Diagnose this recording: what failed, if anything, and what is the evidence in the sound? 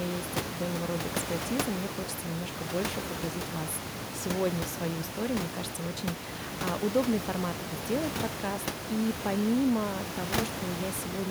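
Nothing in the chain stood out as a failure on listening; the only thing beneath the speech is the room noise at the microphone, about 6 dB below the talker, which belongs to the recording space rather than to the system.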